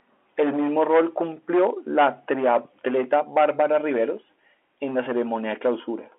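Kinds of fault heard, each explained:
No faults can be heard in this speech. It has the narrow sound of a fixed telephone line in G.711 coding, with the band running from about 300 Hz to 3.4 kHz.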